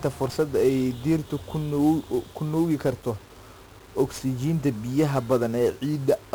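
Speech, carrying heavy 1-bit DFPWM compression throughout. One bit per sample nudges an adaptive level, so broadband noise fuzzes everything and buries the treble in hiss, consistent with roughly 48 kbps.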